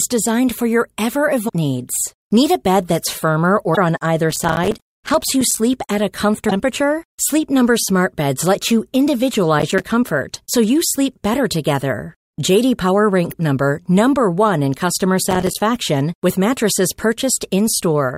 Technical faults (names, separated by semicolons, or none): damaged data in a compressed stream; processor overload crackle